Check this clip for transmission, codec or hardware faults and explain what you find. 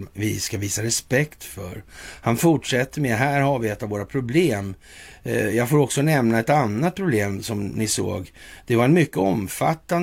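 Nothing wrong can be heard anywhere in the speech.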